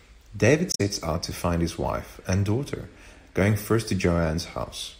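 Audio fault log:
0.69–0.81 s: damaged data in a compressed stream. The speech is disrupted for about 0.11 s. Corrupted bytes in the encoded frames there left the decoder misreading them and losing sync until it found the next valid frame header.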